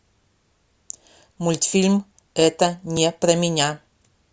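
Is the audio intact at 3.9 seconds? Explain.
Yes, the audio is intact at 3.9 seconds, with no fault audible at that moment.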